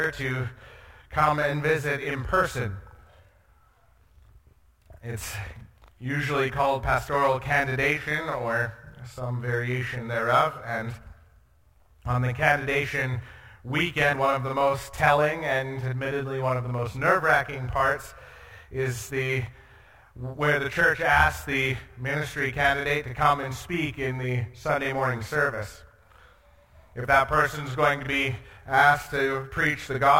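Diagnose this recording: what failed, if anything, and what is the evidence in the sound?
What failed is a channel delay, heard as doubling, and it runs the whole clip. Every onset arrives twice at equal strength, the second copy trailing by 40 ms, so transients smear into a tight slap rather than anything like room sound. That points to the driver or buffer stage: one channel got held back by a long buffer relative to the other, then the pair was folded to mono, stacking the late copy right on top.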